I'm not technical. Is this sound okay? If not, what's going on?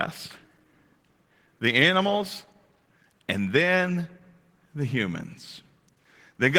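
No. From start to finish, the speech carries a compression fault called Opus voice compression. The file was squeezed hard to save space, so the coder rebuilt the voice from a rough sketch instead of keeping every detail. The result sounds plainly hoarse, grainy and a bit robotic. Unlike a simple dull or muffled recording, the high end is still there but sounds rough, and unlike dropouts, the sound never cuts out. The roughness is steady throughout.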